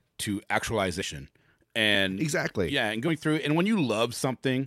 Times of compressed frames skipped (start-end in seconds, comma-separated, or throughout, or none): 1.00, 3.07